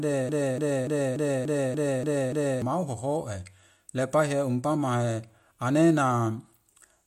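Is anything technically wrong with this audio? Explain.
Yes. From the very start to 2.62 s the audio is caught in a broken-record loop that is already under way when the clip begins. A fragment of about 0.29 s repeats exactly, back to back, eight times. The likely cause is a player, encoder or stream stalling and re-sending the last fragment it held, so the speech that belonged there is lost. On a waveform and spectrogram, identical blocks tile at a fixed 0.29 s period until normal speech resumes.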